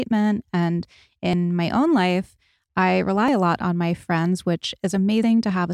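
Likely audio missing between chunks, from a recorder handling the speech in 2-second blocks: at 1.33, 3.28 and 5.23 s, roughly 50 ms vanishes and the speech jumps abruptly.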